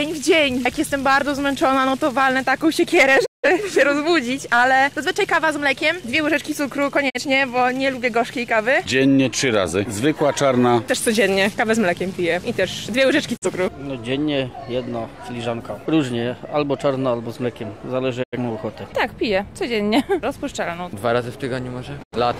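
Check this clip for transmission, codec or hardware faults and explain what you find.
Yes, one fault recurs: a digital broadcast dropout, heard five times. The receiver lost valid frames and muted. Each gap fades out over about 20 ms, goes silent, then the sound resumes with the missing material gone. The holes fall at 3.24–3.48 s, 7.08–7.20 s, 13.36–13.47 s, 18.22–18.37 s and 22.02–22.17 s. The missing stretches last about 0.17 s, 0.04 s, 0.04 s, 0.09 s and 0.09 s. Those lengths fit whole frames of roughly 43 ms each.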